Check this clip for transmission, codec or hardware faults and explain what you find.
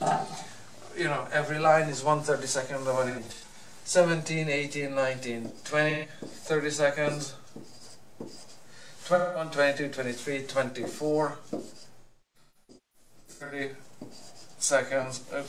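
AAC frame loss with concealment occurs four times: 3.08–3.54 s, 5.90–6.09 s, 9.14–9.51 s, and 12.01–13.6 s. The decoder patches missing frames from the last good spectrum. Each gap becomes a smeared, noisy or phasey patch. The longest, near 12 s, loses about 1 s of audio scattered over about 1.5 s.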